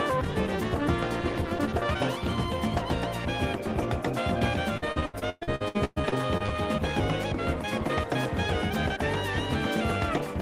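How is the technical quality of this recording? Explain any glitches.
The recording has one clear fault: a burst of repeated packet loss with the typical robotic sound, from 4.77 s to 6.50 s. Over that 1.7-second stretch the audio breaks up into roughly a dozen or more short dropouts, the longest about 117 ms. Each hole is patched by extending the last received sound, and another loss follows quickly. About 39% of the span is this stretched fill, so the sound turns choppy and robotic, with pieces missing.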